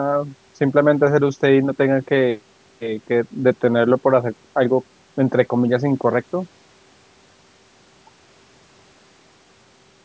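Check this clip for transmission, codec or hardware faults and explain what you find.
No transmission, codec or hardware faults are audible.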